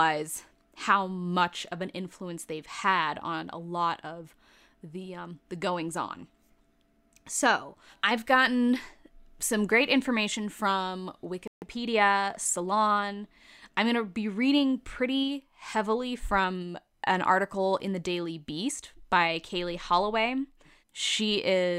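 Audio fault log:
11.48–11.62 s, playback stall: Just after "some great information from", the speech stops dead for about 0.14 s and then carries on, likely because the player's buffer ran dry. It reads as a hole in playback rather than a natural pause, since hurried catch-up follows.
11.62–13.06 s, time-compressed catch-up: Once playback resumes, the speech runs about 1.1 times faster for roughly 1.4 s while keeping its normal pitch. The player splices out small pieces and cross-fades across the joins. A sped-up tape would raise the pitch instead.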